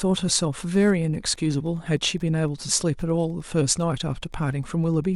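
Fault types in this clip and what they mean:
Wi-Fi interference: a nearby Wi-Fi radio's beacons are rectified by the audio circuit, giving faint ticks every 102.4 ms, about ten per second, far below the speech from 0.31 s onward. That slow, even ticking distinguishes it from the denser 217 Hz buzz of phone interference.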